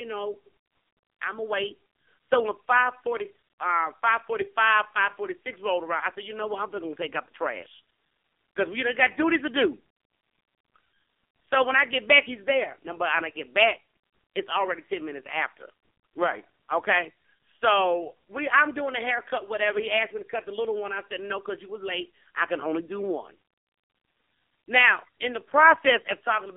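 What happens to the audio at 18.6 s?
At 18.6 s the speech is still going through the AMR narrowband mobile codec, which runs for the whole clip rather than starting or stopping there. The line band is limited to 250 Hz to 3.5 kHz, with nothing above 3.5 kHz. The codec rebuilds each 20 ms frame from a vocal-tract model driven by a few pulses. The heavy damage makes the voice buzzy and synthetic, which points to a low AMR-NB mode of roughly 6 kbps.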